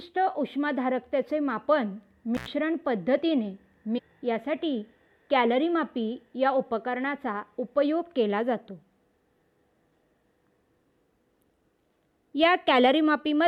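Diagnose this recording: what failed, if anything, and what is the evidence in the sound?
Intermittent contact in the analogue wiring, between 2.35 and 2.48 s. The sound drops out for about 94 ms, with crackle at the start and end of the gap as the connection breaks and makes again. During the gap the signal path is open, so the programme is absent rather than faded. The crackle comes from the contact surfaces arcing and rubbing as they separate and reseat, which points to a loose plug or a worn cable conductor.

Stream segment skipped, at the network or playback stage, between 3.97 and 3.99 s. The sound jumps abruptly ahead at this point, with a short blip at the join and no fade or crossfade. Material before and after the join does not line up. The likely cause is a segmented stream in which one segment failed to arrive or load, so the player moved straight on to the next one and spliced the two together without smoothing the transition.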